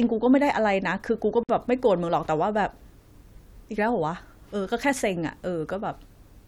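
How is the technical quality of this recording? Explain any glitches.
The recording has one glitch, a gap at a join of encoded pieces.

From 1.43 to 1.49 s, the speech drops out for about 55 ms and then resumes exactly where it stopped. The recording was evidently encoded in separate pieces that were butted together untrimmed. Each piece keeps its encoder's start-up silence and padded final frame, and that dead time plays back as a hole. Here it would recur every 6.0 s. On a waveform it shows as a flat strip with smeared, sloping edges. A spectrogram shows a vertical blank band, its borders blurred by the codec.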